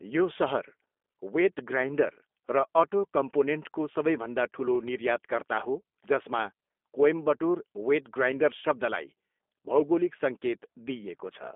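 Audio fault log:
throughout G.729 codec: speech is confined to a 250 Hz to 3.5 kHz telephone band with nothing above 3.6 kHz, and sounds plainly rough and synthetic because each 10 ms frame is rebuilt from a vocal tract filter, pitch predictor and sparse pulses, consistent with 8 kbit/s G.729A.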